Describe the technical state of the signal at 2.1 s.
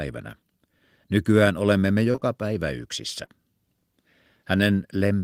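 Short concealed packet loss runs from 2.11 to 2.24 s, as three back-to-back gaps starting at 2.11, 2.16 and 2.20 s, right after "olemme me" and before "päivä yksissä". Each time about 20 ms of the call arrived too late to decode, and the receiver covered it by extending the preceding sound before crossfading into the real signal. Chained together, the patches produce a brief smeared, wobbling stretch where detail is lost.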